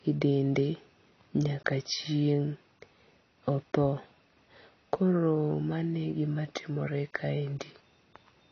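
Speech runs throughout with AAC compression damage, likely from AAC-LC at a low bitrate around 24 kbps: nothing survives above 6.5 kHz, and sibilants turn fizzy and smeared. That warbling texture sets it apart from a plain low-pass filter, which would only dull the sound.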